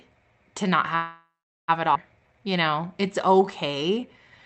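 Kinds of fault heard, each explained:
call audio freeze: From 0.95 to 1.70 s the speech halts and the last sound is drawn out into a fading buzz that sinks into roughly 390 ms of silence. It then resumes exactly where it left off, with nothing lost. A delay of about 0.73 s has been inserted. The likely cause is packets held up in transit, so the jitter buffer ran dry and the receiver had to fill the wait until they arrived.
skip ahead: At 1.94 s the speech lurches forward through a tiny join of under 10 ms, with no real pause. Roughly half a second of speech is simply gone, and the sounds on either side are butted together. This happens when a stretch of audio is dropped, either in transit or by an overfull jitter buffer, while later audio is already queued. Playback then leaps straight to the waiting material.
jitter buffer slow-down: From 2.20 s to the end at 4.43 s the speech plays at about 88% of normal pace with its pitch unchanged. 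Sounds are drawn out, all within the 8 kHz band of the Opus call path. The jitter buffer was rebuilding its reserve by repeating single pitch periods and slivers of pauses over and over. This stretched the passage by about 272 ms.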